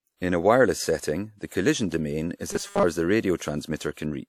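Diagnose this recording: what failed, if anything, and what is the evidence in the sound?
Pre-echo at 1.47 to 1.51 s and again at 3.37 to 3.40 s, a codec-stage fault. Just before each sharp attack a short hiss appears, spread over about 44 ms in the first case and 30 ms in the second, and the attack itself sounds softened. The transform codec spread quantisation noise across a whole block, so noise meant for the loud onset also filled the quiet moment ahead of it within that block.

Robotic sound from repeated short buffers from 2.51 to 2.83 s, at the driver or buffer stage. The speech turns into a rigid, metallic buzz at 200 Hz that tracks the original only loosely, with most of that span made up of repeated material. The likely cause is new audio arriving too seldom, with the software filling each gap by looping the last 5 ms, since one over the buffer length sets that 200 Hz rate, while the real audio is skipped.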